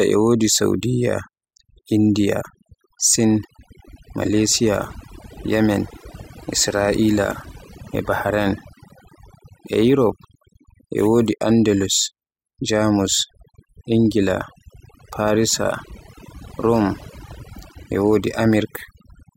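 From start to finish, the clip carries overdone noise removal: a noise reduction stage was driven too hard, so it pushes individual frequency bands far down or shuts them off whenever their level sits close to its noise estimate. Quieter parts of the speech fall below that threshold and are stripped out along with the background noise. The gaps between phrases collapse to near silence dotted with twinkling specks.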